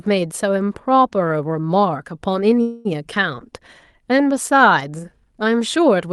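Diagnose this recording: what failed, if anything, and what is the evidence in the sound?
The fault sits in the network stage of a call, with a call audio freeze from 2.61 s to 2.87 s. For about 0.24 s the sound stalls into a fading buzz rather than true silence. Then the speech resumes exactly where it stopped, with nothing skipped. That pattern points to packets held up in transit, likely a network delay, while the jitter buffer ran dry and the receiver stretched the last sound to fill the wait. Everything after is pushed later by that same 0.24 s. The call codec's band limit near 12 kHz applies throughout.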